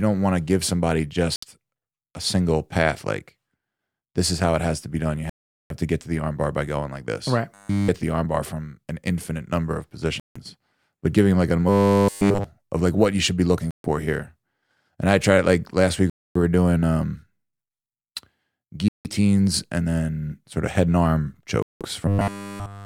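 The speech drops to silence at 1.36 s and again at 5.30 s. These are Bluetooth stalls. Playback likely paused while delayed packets were resent. Gaps run from 65 ms to about 0.4 s, the longest at 5.30 s.

At 7.54 to 7.88 s, robotic sound from repeated short buffers appears. A 10 ms slice is likely looped. This imposes a rigid 100 Hz metallic buzz. Essentially none of the real audio comes through.

Further stalls cut in at 10.20, 13.71, 16.10, 18.88 and 21.62 s. The buzz returns at 11.69 to 12.44 s and from 22.08 s to the end.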